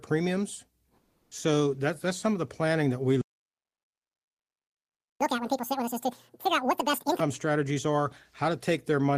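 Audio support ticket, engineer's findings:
Comfort noise in place of the background, 0.99–1.31 s. Real room tone swapped for flat synthetic hiss, about 9 dB quieter, for 320 ms. Likely Opus DTX at the sender during the pause.

Playback stall, 3.21–5.21 s, right after "the planning that we". Output silent for about 2 s. Likely player buffer underrun or blocked audio thread.

Catch-up at higher speed, 5.21–7.2 s. Backlog resampled at 2.0x, pitch up about ten semitones. Normal rate returns by "strategies are".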